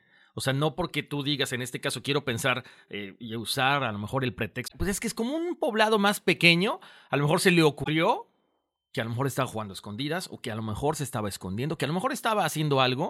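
Damaged data in a compressed stream corrupts the frames at 4.64 to 4.72 s and again at 7.80 to 7.88 s. Each time the decoder misreads them and loses sync while hunting for the next frame header, so the speech breaks into a short glitch of about 80 ms.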